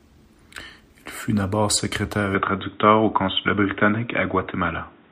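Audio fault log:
2.35 to 5.12 s: likely input switched to a poorer device. Speech abruptly dulls, nothing above 3.8 kHz, faint new noise floor; the spectrogram's upper band vanishes at 2.35 s.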